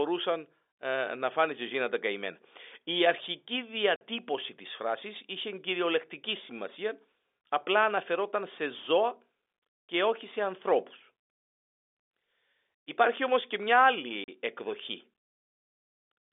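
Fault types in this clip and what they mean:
Packet loss filled with silence: chunks of the speech stream never arrived and the receiver played dead silence in their place, leaving two abrupt holes, 50 ms at 3.96 s just before "της φράσης είχε κυριολεκτική" and 40 ms at 14.24 s just after "όμως και μια". Both lengths fit whole 10 ms packets. A concealment scheme would fill the gap with repeated or faded sound, but these gaps are true silence cut off sharply.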